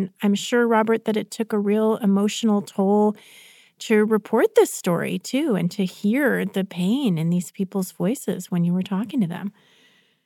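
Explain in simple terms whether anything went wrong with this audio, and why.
Nothing went wrong with this audio; there are no technical faults to hear anywhere in the recording.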